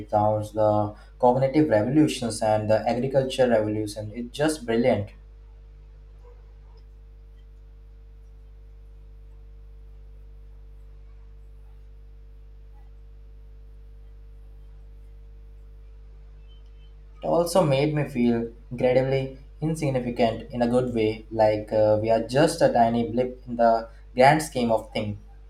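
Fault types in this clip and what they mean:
Mains hum: a steady 50 Hz drone under the speech for the whole clip, sitting roughly 25 dB down, the usual sign of a ground loop or nearby transformer.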